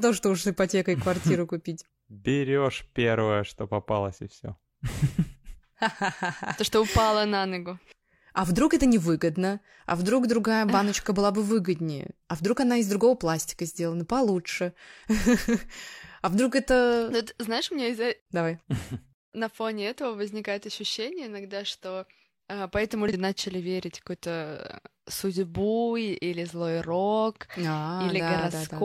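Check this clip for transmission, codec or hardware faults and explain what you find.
One fault shows up in this speech clip. At 23.08–23.13 s there's damaged data in the compressed stream: the decoder loses sync and produces a brief glitch heard as a chirp, squawk, click or short gap.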